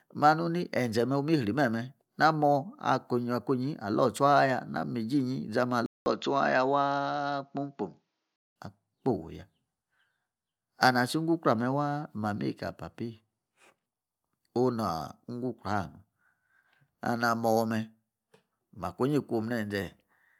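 At 5.86 s a 200 ms gap appears on the waveform. The speech then turns dull and boxy until 8.56 s at an unchanged level. The spectrogram shows nothing above 7 kHz and a faint new noise floor. The likely cause is an input switched to a poorer device.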